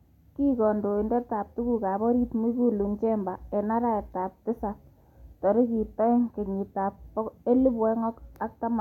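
No technical faults can be heard anywhere in this speech recording.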